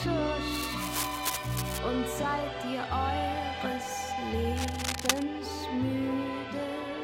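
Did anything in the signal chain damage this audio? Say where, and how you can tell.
Yes. Two bursts of dense, uneven scratching and rustling sit over the sound, from 0.48 to 1.79 s and again from 4.56 to 5.23 s. The first runs about 5 dB below the signal, and the second is roughly as loud as the signal itself. This is cable scratch noise from the analogue wiring, likely a worn cable, connector or control carrying DC that was moved, so its contact resistance changed rapidly and broke into irregular noise.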